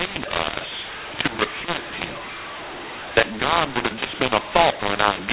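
From the first moment to the end, the speech was written as mu-law but read as A-law, a mu-law and A-law mixup, so levels scramble into harsh distortion and pauses hiss.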